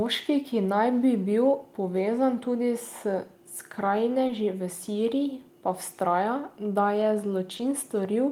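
At 4.27 and again at 7.57 s the speech shows short concealed packet loss: about 20 ms arrived too late, so the decoder extended the preceding sound across the gap and blended back. Each sounds like a brief smear or wobble, not the silent hole of an unconcealed dropout.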